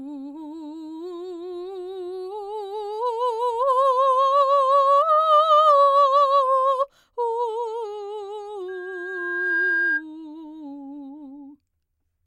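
At 8.68 s a loudspeaker feedback squeal starts under the music. A microphone is picking up the speaker it feeds. At 1.6 kHz the loop gain goes past one, so that frequency keeps feeding itself. It swells for about a second, rising to roughly the same level as the music. It is heard as a single piercing tone that grows into a howl. It stops at 10.04 s.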